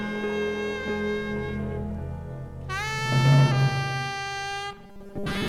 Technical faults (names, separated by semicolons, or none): robotic sound from repeated short buffers